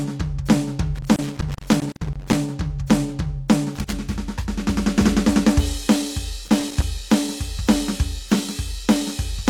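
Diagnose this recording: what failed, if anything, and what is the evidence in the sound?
Loose connector crackle in the analogue wiring: irregular bursts of crackle over the music from 0.95 to 2.36 s, 3.75 to 3.93 s and 6.45 to 6.82 s. A worn or dirty contact intermittently breaks the signal path as it shifts, chopping the audio into scratchy fragments.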